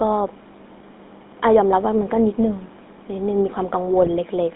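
GSM full-rate codec runs through the whole clip. The speech has passed through a coder that models the vocal tract and drives it with a thinned, regularly spaced pulse excitation, which fits a 13 kbps GSM full-rate stream. The line band runs from about 250 Hz to 3.7 kHz, so the low body and everything above that ceiling are gone. The coding damage is plainly audible as a buzzy, gravelly roughness laid over every syllable.

GSM bit errors strike from 4.02 to 4.09 s, near the very end. Corrupted bits reached the decoder and scrambled the filter, pitch or gain parameters it rebuilds speech from, which points to about three damaged frames and fits an error rate of around 1.4 percent. For those few tens of milliseconds the spectrum twists and the level jumps, so the speech breaks into a short squawk and gargle before the clip ends.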